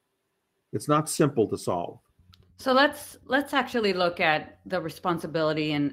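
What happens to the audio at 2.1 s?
Nothing goes wrong at 2.1 s; the speech runs on intact through that moment, with no dropout, click or distortion to be heard.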